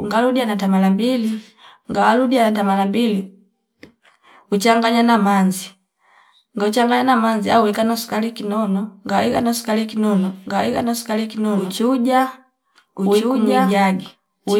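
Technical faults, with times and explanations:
10.46 s to the end, doubled audio track: the speech is suddenly joined by a second copy, about as loud, trailing roughly one and a half seconds behind with no decay or room colour, likely from a slower second capture path mixed in.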